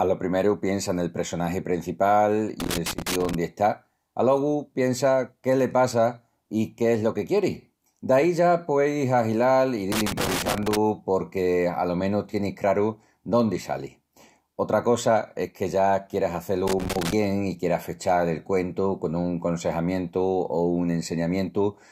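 Loose connector crackle breaks in at 2.60 to 3.35 s, just after "piensa nel pressonagi prencipal", then at 9.92 to 10.77 s and 16.67 to 17.13 s. Each is an irregular burst of scratchy crackle as a worn or dirty contact makes and breaks, chopping the signal.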